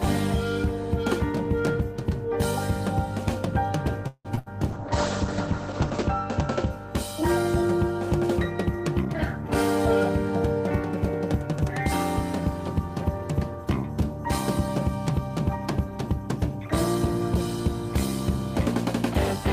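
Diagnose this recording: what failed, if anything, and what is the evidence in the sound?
Packets on the network path were likely held back long enough for the jitter buffer to run dry, producing a call audio freeze from 4.07 to 4.27 s. The receiver stretched the last sound into a fading buzz that ends in about 50 ms of silence. When the packets arrived, playback picked up exactly where it stopped. So about 172 ms of gap was inserted and the delay grew by the same amount, with nothing lost.

Right after, at 4.35 s, a short concealed packet loss occurs on the network side. About 20 ms of audio never reached the decoder in time. The receiver covered the hole by extending the preceding sound for roughly 22 ms and blending back in. The result is a brief smear or wobble rather than an audible gap.

The next packets, from 4.39 to 4.48 s, were lost as well, a burst of packet loss removing about 80 ms of audio. 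Here the concealment runs longer, about 72 ms. It continues the last sound and lets it decay into a fading buzz or hiss, then jumps ahead. The material that belonged in that span is missing, so the sound lurches forward past it.

From 4.72 to 6.76 s a call bitrate drop sets in. The bandwidth estimate collapsed and the encoder fell from 48 kbps to 10 kbps, staying at the bottom for about 1.3 s. At that rate the codec quantises coarsely and narrows the coded band from 20 kHz to 8 kHz. The sound turns rough and muffled, with the upper treble removed, until the bitrate recovers.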